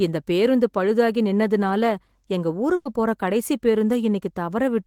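At 2.75 to 2.87 s, a burst of packet loss: the receiver stretches and fades the last sound for about 100 ms, then speech resumes with roughly 100 ms missing.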